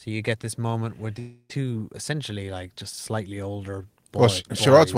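A speech clip in which the stream likely suffered a long network dropout, with no audio reaching the receiver from about 1.19 s to 1.51 s, right after "get this moment where". The receiver papered over the gap by stretching the last sound into a fading buzz for roughly 300 ms, followed by about 50 ms of near-silence. Speech resumes at "essentially like just slightly", but about 300 ms of the original audio never plays.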